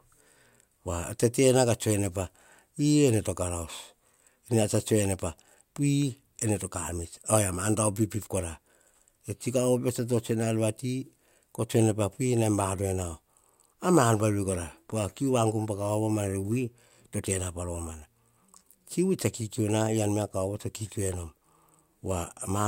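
No technical faults can be heard in this recording.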